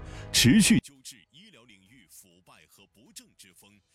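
At 0.79 s the level collapses by about 32 dB and stays down to the end. What remains is faint. Nearly all of the sound disappears, background included. This points to one channel inverted. The likely cause is one stereo channel flipped in polarity. When the two channels are summed, everything they share cancels out. Only the small difference between them survives, heard as a faint trace.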